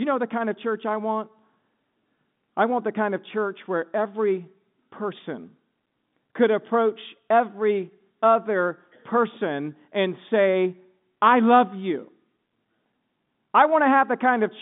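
Speech with no technical faults. It carries the narrow band of G.711 telephone coding, roughly 150 Hz to 3.6 kHz, with at most a faint coding noise that follows the level of the speech.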